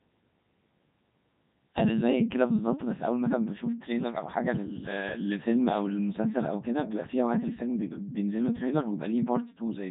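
From start to finish, the speech has passed through the Codec 2 vocoder. Heavy codec damage is heard throughout. The original waveform is gone. Only pitch, voicing, energy and a rough spectral envelope survived. The decoder rebuilt the voice from sine waves. The result sounds robotic and buzzy. The sound fits the 3.2 kbit/s mode. Nothing is heard above 3.8 kHz, so the top end is dull and closed in.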